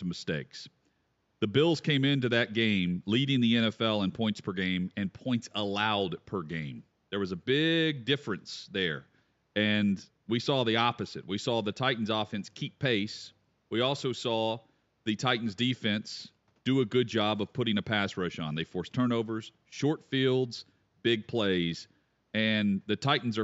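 The speech carries no technical faults, with only the room's own background noise faintly present at about 45 dB below the voice level.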